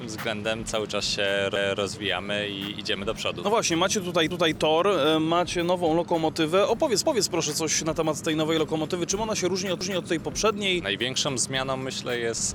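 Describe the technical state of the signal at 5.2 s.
At 5.2 s the signal is intact, with no audible dropout, distortion, glitch or other technical fault at that moment.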